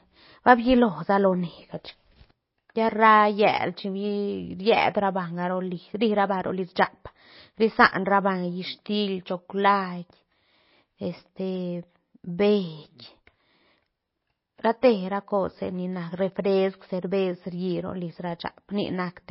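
Likely MP3 compression at a low bitrate runs through the whole recording, cutting everything above 5.6 kHz and letting weak frequency lines flicker, so the speech sounds dull, watery and swirly.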